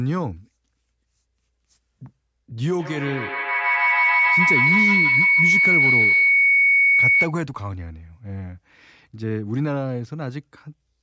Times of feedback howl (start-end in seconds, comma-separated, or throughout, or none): 2.79-7.39